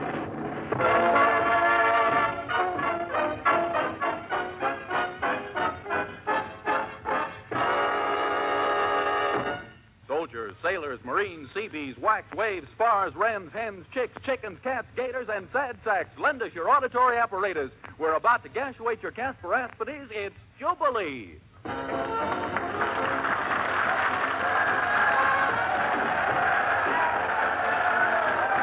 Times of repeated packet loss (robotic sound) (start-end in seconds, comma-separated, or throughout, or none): none